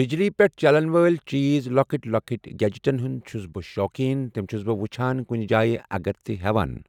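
Nothing stood out on listening to this speech recording.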